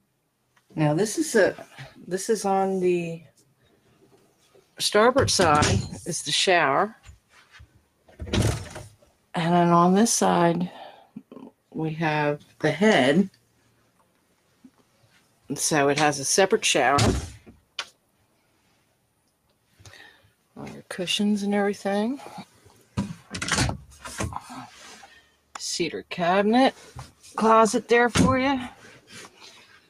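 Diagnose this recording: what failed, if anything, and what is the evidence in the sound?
Noise suppressor applied to music or sounds, throughout: a speech-oriented suppressor in the call-processing stage treats sustained, non-speech material as noise. Level swings of around 5 dB track the content, so held sound and decays pump and thin while attacks pass largely intact.

Sound cut by the noise suppressor, at 3.28–4.79, 6.96–9.26, 11.02–15.49, 17.4–20.31, 22.46–23.31, 24.7–25.55, 27.09–27.24 s and from 28.75 s to the end: here the suppressor's gain falls much further, dropping steady and fading passages by about 11 to 12 dB and cutting their tails short.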